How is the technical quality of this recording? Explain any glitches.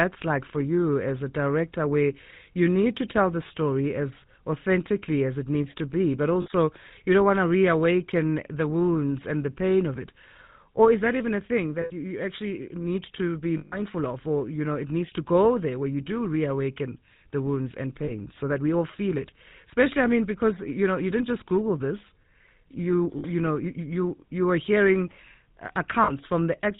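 Technical quality is limited: the whole recording carries a plainly audible GSM full-rate codec signature, and seven short dropouts are bridged by frame-loss concealment.

Throughout, the speech has the buzzy, gravelly roughness of the GSM full-rate codec, and nothing above 4 kHz. The character fits 13 kbps full-rate coding. The codec models the vocal tract and drives it with a sparse, regularly spaced pulse excitation that keeps only one sample in three. That coarse excitation produces the grainy texture, and the narrow band removes sibilance and air.

Lost GSM frames occur at 3.48 s (about 20 ms), 6.42 s (40 ms), 11.82 s (80 ms), 13.58 s (140 ms), 18.04 s (40 ms), 23.18 s (60 ms) and 26.04 s (40 ms). Each gap is filled by repeating the last good frame's parameters, so the sound briefly freezes into a rough, metallic ring. The 140 ms event at 13.58 s is the longest.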